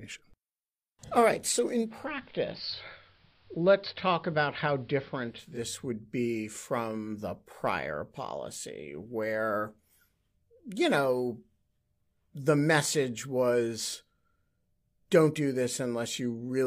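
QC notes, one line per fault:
1.67–5.69 s, digital radio blending to analogue: after "right so" the sound turns dull, about 1 dB quieter and faintly hissy until "would be from the". The receiver lost its digital stream and cross-faded over 421 ms to AM, which carries less treble.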